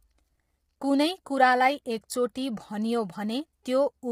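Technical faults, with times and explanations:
Throughout: low-delay AAC compression. The speech is rough and grainy, with noise between the harmonics and a thin, synthetic top band. It's likely AAC-ELD at a rate near 24 kbps, where short frames blur pitch harmonics and starve the coder of bits.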